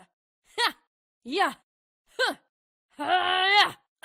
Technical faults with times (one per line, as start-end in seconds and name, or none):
none